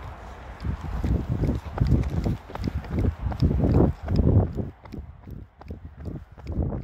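From 4.04 to 5.43 s, zipper noise: the level drops by roughly 10 dB in coarse unsmoothed steps, around forty per second, rather than as a continuous fade. Each step leaves a small click, so a fine ticking rides on the sound until the drop completes.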